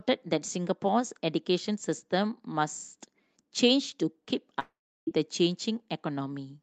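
At 4.59 s the speech breaks off. The last sound is drawn out into a buzzy hiss that fades away, leaving near silence for about a third of a second, and the audio picks up again at 5.09 s with roughly 480 ms of material gone. This is likely a long network dropout: packets stopped arriving, and the receiver filled the gap by extending the final sound until concealment gave out.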